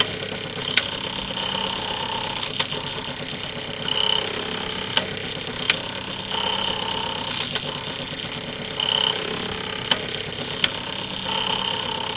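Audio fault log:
No faults are audible in this clip. The sound carries through a WebRTC call path with nothing above 4 kHz, a band limit that fits a G.711 A-law codec at 64 kbps.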